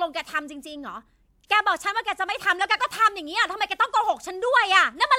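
No faults are audible anywhere in the speech recording.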